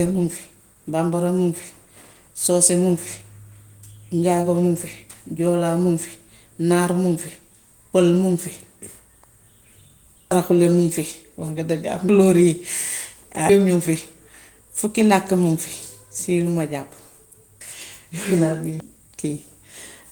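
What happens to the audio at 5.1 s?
Nothing goes wrong at 5.1 s: the speech there comes through intact, carried by Opus voice compression in its hybrid mode at about 20 kbps with only light coding damage and the full audio band kept.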